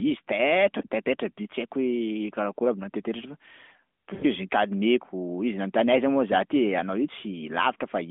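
At about 4.14 to 4.24 s there's a run of lost AMR speech frames: the decoder stretches and fades the sound for roughly 80 ms, which fits four dropped 20 ms frames.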